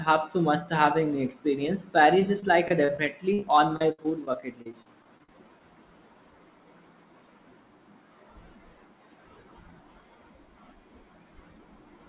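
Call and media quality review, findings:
Repeated packet loss (robotic sound), 2.2–5.61 s, just after "must have an experience": jitter buffer concealing frequent gaps, longest about 59 ms. It extends prior audio into each gap, giving choppy speech with dropped fragments. Band-limited to 4 kHz, consistent with G.711 mu-law.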